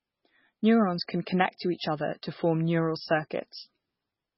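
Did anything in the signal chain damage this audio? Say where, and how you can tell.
Yes. The damage happened at the codec stage and runs through the whole speech clip. Nothing comes through above 5.6 kHz, so the treble stops at a hard ceiling. The speech also sounds watery and swirly, because faint detail flickers in and out from one moment to the next. This heavy damage is likely MP3 compression. The encoder was starved of bits, which fits a very low bitrate near 16 kbps. It cut the top band and dropped weak frequency lines frame by frame.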